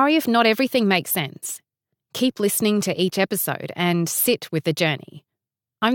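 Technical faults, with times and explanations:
No technical faults can be heard in this speech recording. There is nothing to list with a time or an explanation.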